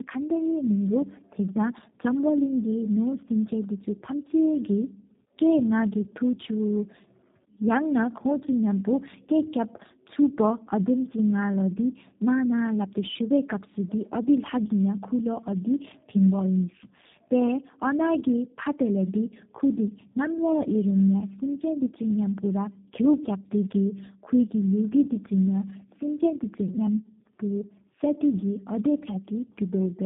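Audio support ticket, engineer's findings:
Tandem speech coding, whole clip: rough, muffled, warbly speech, nothing above 3.8 kHz. Two low-rate speech coders in a row, likely 8 kbit/s G.729A bridged through G.711 mu-law; the second coder re-encodes the first one's degraded output, so artefacts compound.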